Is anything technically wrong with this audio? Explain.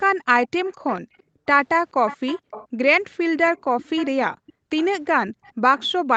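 Yes, two related faults from a speakerphone call.

Echo leak: from 0.44 to 1.23 s, 2.07 to 2.68 s, and 3.45 s to the end, a faint copy of the speech trails about 0.43 s behind, roughly 20 dB below the speech at first and about 15 dB below later. Its likely cause is a far-end echo canceller passing loudspeaker sound back. Its fixed, distinct delay sets it apart from room reverberation, which would smear the sound rather than repeat it.

Background gated by the echo canceller: at 0.73 to 1.46 s, 3.23 to 3.34 s, and 4.35 to 4.7 s, the room background drops by up to about 40 dB. These dips last roughly half a second, a tenth of a second, and a third of a second. The audio tops out around 8 kHz, as expected from the call's Opus codec.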